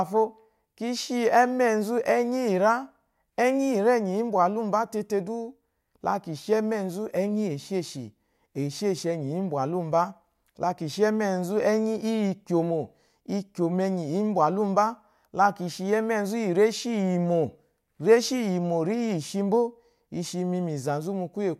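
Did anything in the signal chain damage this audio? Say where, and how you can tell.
No, nothing in the signal chain damaged this audio.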